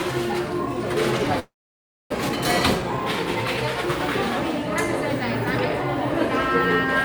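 A sound recording with two network faults. From 1.39 to 2.14 s, the last sound smears into a fading buzz or hiss and then about 0.63 s of silence, with 0.6 s never recovered. This is likely a long network dropout, seen as a blank gap on the spectrogram. Then from 2.22 to 3.69 s a jitter buffer speed-up plays the audio about 7% faster at unchanged pitch. Roughly a tenth of a second is trimmed, so events bunch closer together on the waveform.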